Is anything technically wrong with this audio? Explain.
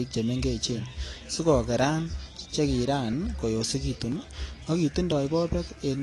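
Yes, there are two faults. The first is periodic USB or driver dropouts, heard roughly once a second from 0.14 s to 5.12 s, about seven in all. At a fixed interval of 1.0 s, something blocking the USB bus or audio driver causes a few milliseconds of audio to be skipped entirely rather than replaced with silence. Each loss is an evenly spaced tick that sounds wherever speech is present.

The second is a dull, smeared quality with plainly audible codec damage throughout, likely from AAC compression. Nothing reaches above 11.5 kHz, so the top of the spectrum is cut away. The encoder appears to have been starved of bits, which fits AAC-LC at around 32 kbps. To save data it discards high frequencies and coarsely quantises what remains, leaving the speech muffled, with a warbly, fizzy edge on sibilants and held sounds.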